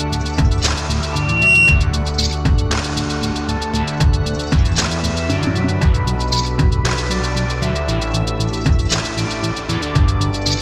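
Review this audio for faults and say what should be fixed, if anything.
Loudspeaker feedback squeal from 1.12 to 1.93 s: a 2.7 kHz tone swells over roughly 0.4 s, ending about 5 dB above the sound. The microphone re-amplifies the speaker's output. Reduce gain or reposition the microphone.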